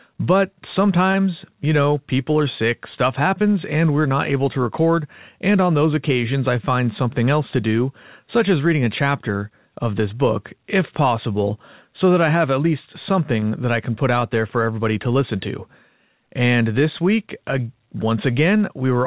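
At 1.12 s, just before "you know people are", a brief smear interrupts the speech, and a similar wobble follows at 13.4 s, right after "I have at least". Both are short concealed packet loss: about 20 ms of audio never arrived in time, so the receiver extended the preceding sound and blended back into the real signal. Both events sit inside a narrowband call path with nothing above 4 kHz.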